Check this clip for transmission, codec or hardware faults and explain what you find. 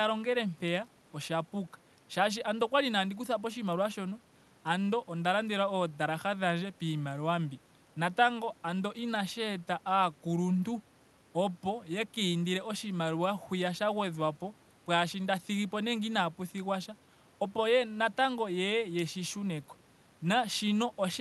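No transmission, codec or hardware faults are present.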